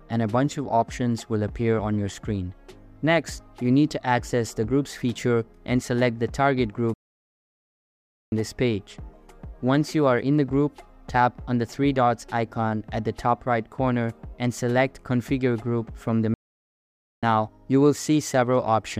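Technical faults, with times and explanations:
6.94–8.32 s and 16.34–17.23 s, playback stall: the sound cuts out in mid-flow and goes silent for about 1.4 s, then about 0.9 s, before returning. The likely cause is the player running short of data or its thread being blocked, leaving the output empty until it recovers.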